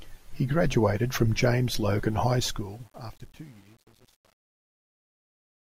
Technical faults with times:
2.26-5.65 truncation distortion on a fade

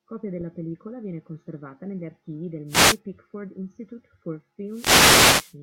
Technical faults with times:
2.67-2.99 wireless microphone noise hit
4.67-5.56 wireless microphone noise hit

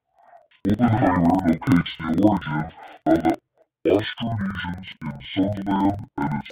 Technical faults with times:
0.00-6.51 interleaved audio read as planar

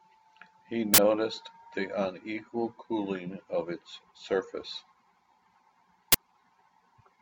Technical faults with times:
0.94-0.98 uninitialised buffer
6.12-6.14 uninitialised buffer

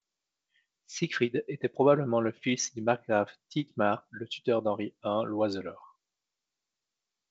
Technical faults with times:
none

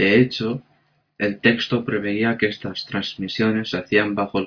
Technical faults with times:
none

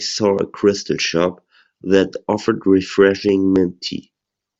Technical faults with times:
0.13-4.59 clock slip clicks

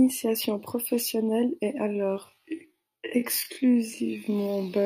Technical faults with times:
1.86-4.85 time-stretched section

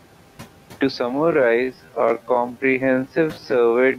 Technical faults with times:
0.00-3.99 noise suppressor artifacts
1.00-3.99 time-stretched section

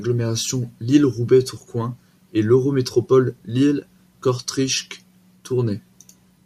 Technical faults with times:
none

